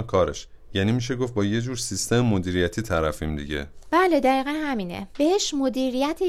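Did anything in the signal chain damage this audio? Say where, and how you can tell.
No, nothing in the signal chain audibly damaged this speech recording. None of the stages from capture through to playback leaves a mark that can be heard.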